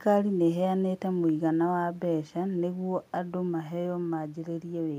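No technical faults are audible.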